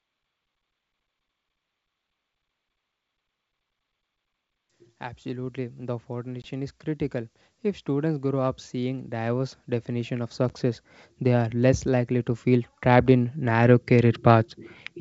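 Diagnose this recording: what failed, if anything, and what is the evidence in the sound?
The failure is in call processing: automatic gain rising. From 4.97 s to 14.54 s the level climbs slowly by about 16 dB, and the background floor swells along with the speech. That shared rise separates it from a talker moving closer to the microphone, which would lift the speech but leave the room noise where it was. The controller judged the input too quiet and kept raising its gain over nearly ten seconds, not in one step.

The network stage shows packet loss on an ADPCM call, heard twice. At 6.42 to 6.47 s there is a hard-edged silent hole of about 20 ms, fitting a couple of lost packets. At 10.49 to 10.51 s there is a shorter hole of about 10 ms, roughly one packet. After each gap the speech comes back slightly distorted, then settles within tens of milliseconds. That distorted re-entry is what separates this from a plain dropout. 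The decoder's adaptive predictor and step size lost track of the sender's and needed a moment to realign. The G.722 coding itself sounds clean and wideband at 64 kbit/s.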